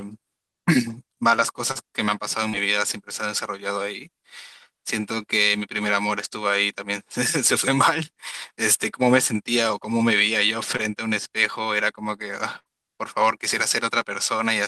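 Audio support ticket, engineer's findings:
Short concealed packet loss, 1.71–1.77 s and 2.49–2.55 s. Brief smear where about 40 ms of audio never arrived in time. Receiver's jitter buffer/concealment carried the last sound forward, then crossfaded back. Small wobble.

Same thing again at 10.77–10.81 s, shorter gap, around 20 ms missing. Network-side drop patched over by the decoder's concealment. Nothing on the capture side.

Burst of packet loss, 12.59–12.70 s. Roughly 60 ms gone in one run, longer than the others. Concealment stretched the last sound out as a fading hold, then playback picked up further along, with that stretch simply missing. Network burst, decoder covering it.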